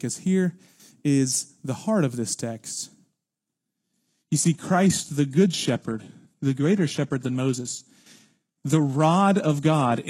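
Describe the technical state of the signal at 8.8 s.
At 8.8 s the speech is inside a stretch of adaptive stream at a lower bitrate, running from 3.75 s to the end of the clip. The quality drops abruptly with no gap. Nothing is left above 12.3 kHz, and the treble turns dull with added codec artefacts, which points to a low-rate HE-AAC version near 16 kbit/s replacing a higher-rate stream.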